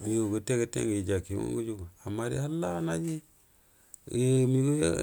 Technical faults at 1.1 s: none

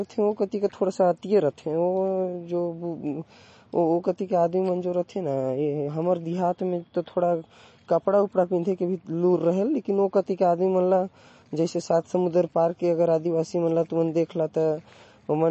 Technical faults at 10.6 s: MP3 compression

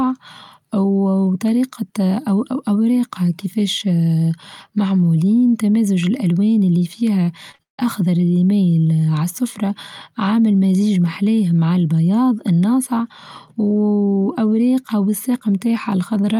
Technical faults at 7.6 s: short concealed packet loss; long network dropout

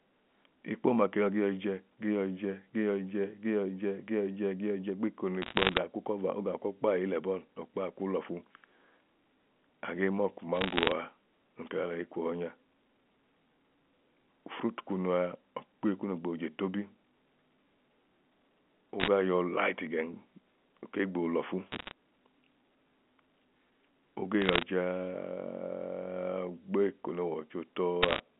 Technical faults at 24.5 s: bit errors on a digital phone line

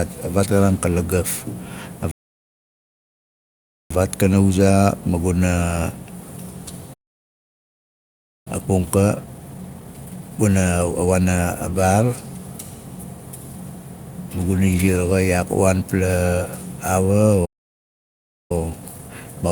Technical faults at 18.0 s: playback stall

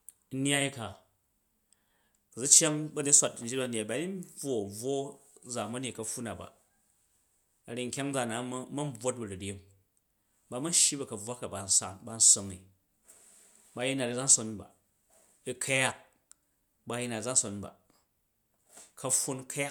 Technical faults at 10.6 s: none

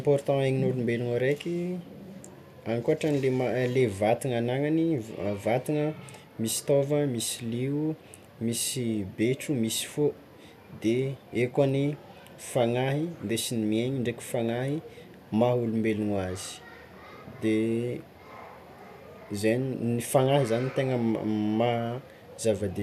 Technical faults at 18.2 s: none

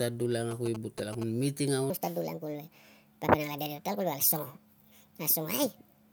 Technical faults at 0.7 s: GSM signalling bursts

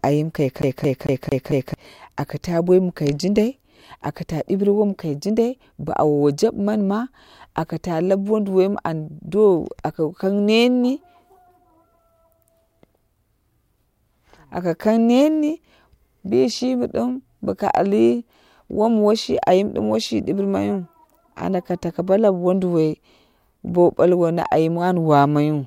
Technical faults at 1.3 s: CD stuck on one turn

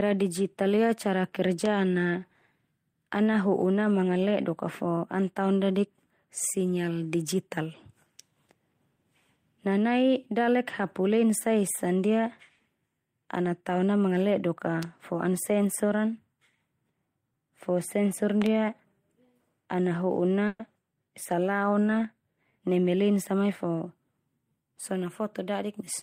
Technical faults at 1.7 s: loud pop

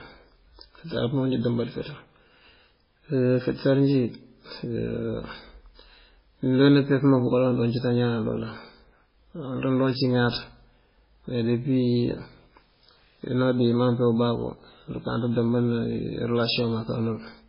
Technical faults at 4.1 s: MP3 compression

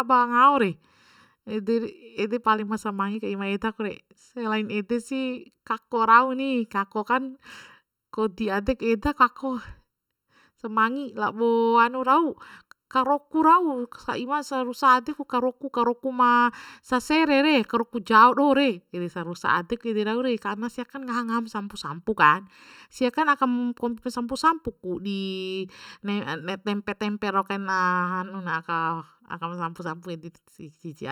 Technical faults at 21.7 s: channel delay (comb filtering)

